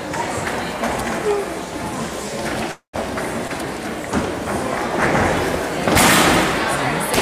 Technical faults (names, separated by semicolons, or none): call audio freeze